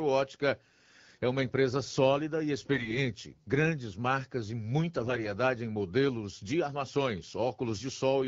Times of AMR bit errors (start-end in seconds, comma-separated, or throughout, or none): 2.72-3.05, 5.01-5.27